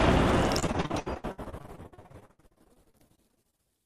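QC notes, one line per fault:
0.59–3.60 s, repeated packet loss (robotic sound): over these three seconds the audio breaks into dozens of short holes, the longest about 73 ms. About 40% of the stretch is patched by stretching out the preceding sound, roughly 1.2 s in total. The repeated patching gives a choppy sound with pieces missing. Unlike a single dropout, the gaps keep recurring, and the synthetic fill between missing pieces is what sets it apart from plain silence-gaps.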